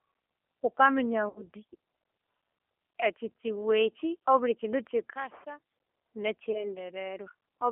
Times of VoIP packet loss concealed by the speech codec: 1.29-1.42, 6.52-6.74

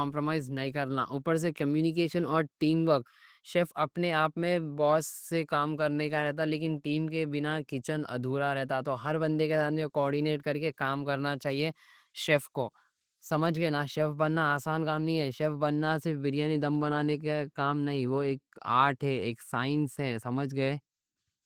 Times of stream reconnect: none

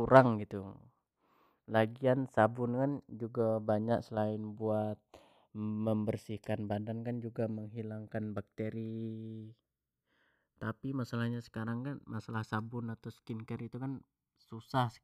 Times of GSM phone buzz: none

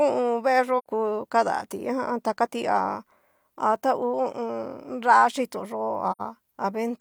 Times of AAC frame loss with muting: 0.78-0.86, 6.11-6.21

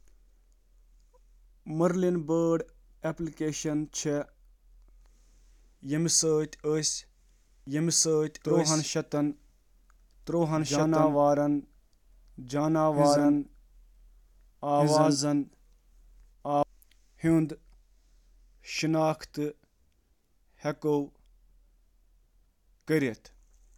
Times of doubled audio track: 7.67-16.63

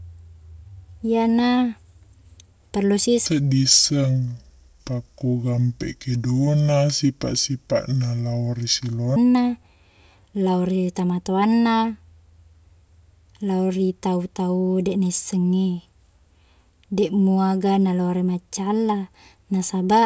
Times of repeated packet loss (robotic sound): none

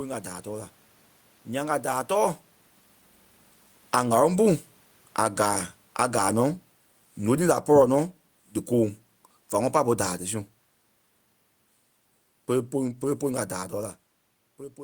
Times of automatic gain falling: 3.79-10.26

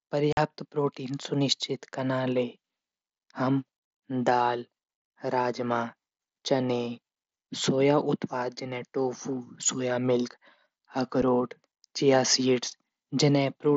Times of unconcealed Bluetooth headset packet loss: 0.33-0.37, 11.22

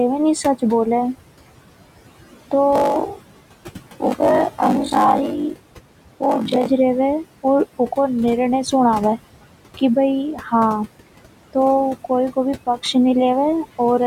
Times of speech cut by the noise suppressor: 10.34-10.53

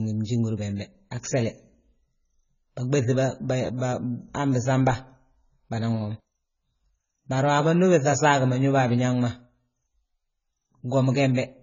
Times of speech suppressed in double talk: none

